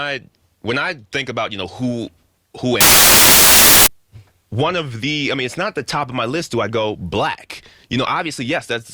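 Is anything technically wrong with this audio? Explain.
Yes. From 2.81 to 3.87 s the samples are built from the wrong bytes: the reader assembles each value with misaligned or swapped bytes, so the rapidly changing low bits dominate. The result is loud, harsh broadband noise, close to white on loud sounds.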